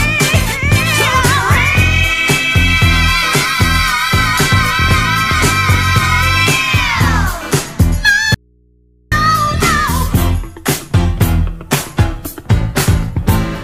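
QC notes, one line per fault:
8.35 to 9.12 s, audio dropout to a faint residue. The sound cuts out abruptly for about 0.77 s and returns just as suddenly. The gap is not silent. It holds a low mains hum, roughly 40 dB below the normal level. This is not a pause or a fade. The source was likely lost for a moment while the input path stayed live, so the open input picked up hum until the signal came back.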